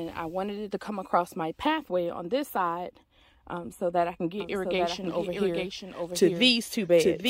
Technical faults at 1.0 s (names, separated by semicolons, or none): none